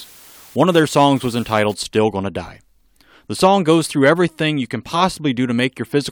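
From 0 to 1.74 s, low bit depth with dither lays a steady hiss roughly 25 dB under the speech. It fits dithered 7-bit rounding.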